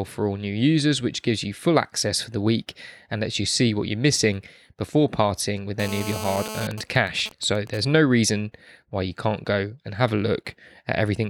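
A hard, raspy buzz at 217 Hz, rich in harmonics and unrelated to the speech, runs from 5.80 to 6.67 s at about 10 dB below the signal. This is GSM phone buzz: a nearby 2G phone in a call transmits 217 bursts a second, and the audio circuit rectifies those radio pulses into sound.

From 6.71 to 7.80 s the buzz breaks into even ticks with a longer 217 Hz buzz twice a second, roughly 15 dB below the speech. These are GSM signalling bursts, sent while the phone's user was silent in the call and again rectified by the audio circuitry.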